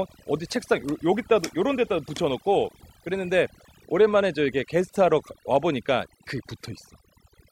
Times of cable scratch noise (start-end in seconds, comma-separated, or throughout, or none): none